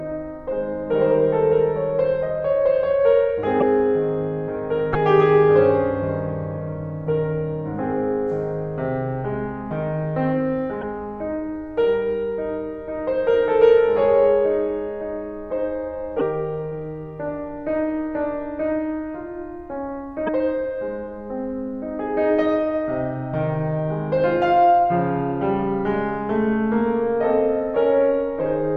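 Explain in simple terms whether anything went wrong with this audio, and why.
The music glitches briefly, about 30 ms each, at 3.59, 4.93, 10.80, 16.18 and 20.26 s. The likely cause is a broken MP3 bit reservoir after data went missing.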